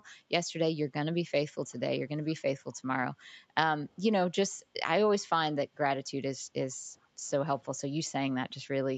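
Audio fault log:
3.42–3.54 s, 4.56–4.74 s, 6.75–7.26 s: background gated by the echo canceller. The room tone ducks about 7 to 10 dB while the far end plays, then springs back. The last dip lingers close to half a second.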